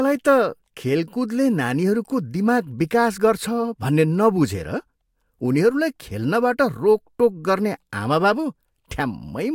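Nothing in this recording stood out as a technical fault on listening.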